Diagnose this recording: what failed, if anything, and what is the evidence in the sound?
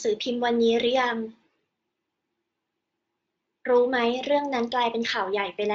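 Nothing here failed: the speech comes across steady and intact, with the Speex encoding running at a generous enough setting that it stays out of the way.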